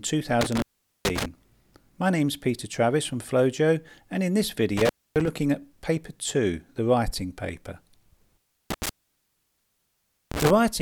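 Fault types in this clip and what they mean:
intermittent contact: a loose connection opens for 0.43, 0.27 and 1.4 s, crackling at the edges and leaving faint hiss, unlike a clean dropout.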